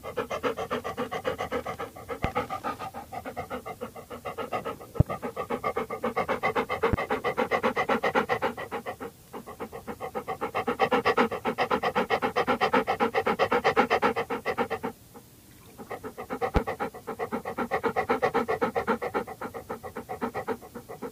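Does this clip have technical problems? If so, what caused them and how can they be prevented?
Yes. A loud pop sounds at 2.24, 5.00, 6.93 and 16.56 s. Each is a single sharp click, far louder than the sound underneath. A voltage spike from a loose plug, switching or static is the likely cause. Securing connections and muting before switching would prevent it.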